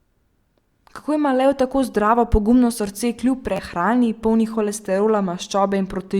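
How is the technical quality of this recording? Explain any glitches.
One glitch stands out. From 3.56 to 3.59 s, just after "zdravo pogumno srce kljub", the speech gives a brief buzzing stutter. This is a repeated buffer: an 11.6 ms slice, which fits a 512-sample buffer, played twice more with hard joins because fresh audio arrived late, replacing about 20 ms.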